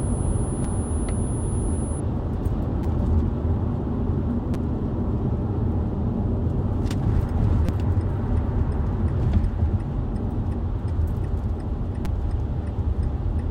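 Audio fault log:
0.0–2.0 s, switching supply whistle: a thin, steady whistle near 10 kHz, about 20 dB below the sound, from a power supply switching in its audible range.
0.64, 2.83, 4.54, 7.66–7.69 and 12.05 s, repeated buffer: brief buzzy stutters as 5.8 ms chunks replay once to four times when fresh audio arrived late, which fits a 256-sample buffer.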